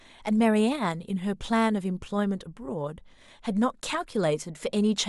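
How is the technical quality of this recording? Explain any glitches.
No audible glitches or faults.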